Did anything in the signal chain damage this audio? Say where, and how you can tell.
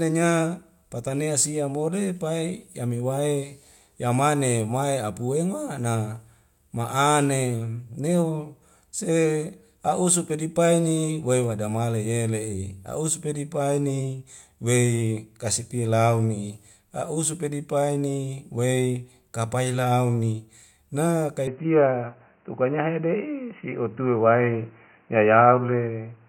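Yes. At 21.47 s the speech turns dull and boxy with no gap, losing everything above 3 kHz, shifting level by about 5 dB and gaining a new noise floor roughly 40 dB down. At capture, the input likely switched to a poorer device with a narrower band.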